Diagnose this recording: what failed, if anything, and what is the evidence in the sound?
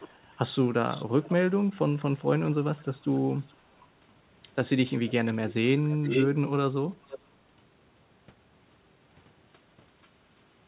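Echo leak at the call-processing stage: a delayed copy of the speech returns at 0.0–0.37 s, 0.88–1.66 s, 1.99–3.86 s, 4.92–5.13 s, 5.91–6.27 s, 7.03–7.25 s and 10.02–10.09 s. It lags by about 441 ms at first and drifts to 485 ms by the end. It is mostly well below the direct speech, but around 5.9 s it is nearly as loud. The likely cause is a far-end loudspeaker whose echo canceller failed to subtract the microphone pickup.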